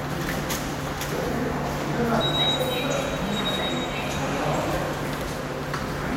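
A recording of everyday sounds, with one fault. At 2.21 s there is a brief blip caused by damaged data in the compressed stream. Corrupted bytes break the decoder's frame sync. It misreads that spot, then recovers at the next valid frame header.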